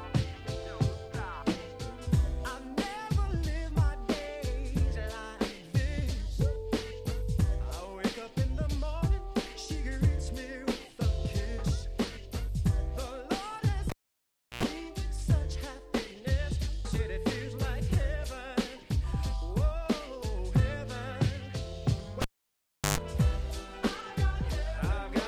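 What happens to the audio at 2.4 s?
At 2.4 s the audio plays through cleanly, with no dropout, click, distortion or other fault at that moment.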